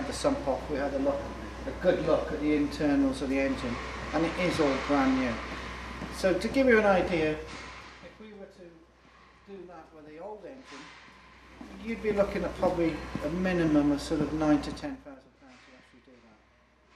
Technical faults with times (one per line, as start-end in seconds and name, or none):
14.68-15.23 zipper noise